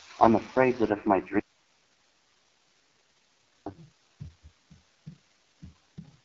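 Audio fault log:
Throughout: AMR wideband (HD Voice) codec. The speech is rough and raspy with a buzzy edge, which fits the lowest AMR-WB rate near 6.6 kbit/s, where the pulse-driven model is starved of bits. On a spectrogram, content fades above about 6.4 kHz into smeared noise, with nothing above 7.6 kHz.
1.39 to 3.66 s: audio dropout to a faint residue. The speech cuts off abruptly and returns just as suddenly about 2.27 s later. In between, only faint hiss remains, roughly 40 dB below the speech, which likely means the signal was lost while the path stayed live. The waveform collapses to a thin flat band, and the spectrogram shows only diffuse low-level noise.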